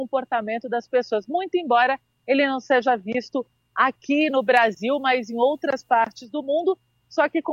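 Pre-emphasis is left on from 4.21 to 6.25 s: a 50 µs treble boost goes uncorrected, lifting 10 kHz about 10 dB, so it sounds thin and sibilant.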